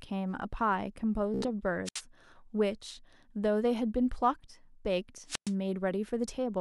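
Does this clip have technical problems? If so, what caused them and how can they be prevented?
Yes. A Bluetooth stutter buzzes from 1.34 to 1.46 s. Late packets made the receiver repeat its last buffer, skipping about 76 ms of sound. Keep the transmitter close and free of interference.

Two wireless microphone squelch dropouts occur, at 1.85 to 2.01 s and 5.27 to 5.53 s. The fading radio signal triggered muting for about 69 ms and 115 ms. Shorten the distance to the receiver and check the antennas.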